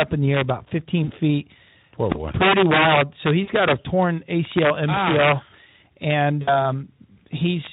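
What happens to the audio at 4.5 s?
At 4.5 s the speech carries integer overflow, present across the whole clip. Driven about 7 dB past full scale, roughly one percent of samples wrap to the opposite sign instead of being limited, giving violent cracks on loud syllables, sharper than clipping.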